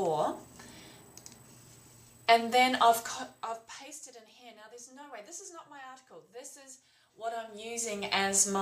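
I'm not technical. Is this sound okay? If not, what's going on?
Yes, nothing in this recording points to a technical problem with the signal.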